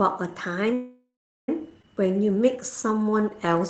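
At 0.73 s the speech stops and a call audio freeze begins. The sound holds on as a fading buzz, then drops to silence for about 0.38 s. Normal speech returns at 1.49 s. The gap lasts about 0.75 s, and nothing seems to be lost. The speech simply resumes where it broke off. The likely cause is packets held up in transit, so the jitter buffer ran dry and the receiver filled the wait itself.

From 1.82 to 1.84 s there is a skip ahead. The speech jumps forward with almost no gap. Roughly half a second of speech is gone. The two sides of the cut are joined nearly directly. This happens when a stretch of audio is dropped while later audio is already queued. Losing it gives back most of the delay the freeze built up.

From 2.02 to 3.6 s a jitter buffer slow-down follows. The speech runs at about 89% of normal speed while the pitch stays the same. Sounds are drawn out. The buffer was rebuilding its reserve. 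It did this by repeating single pitch periods and bits of pauses many times in a row, adding about 173 ms in total. All of this plays through an Opus call path. Its high end stops at 8 kHz, and the coding noise fits a bitrate near 20 kbps.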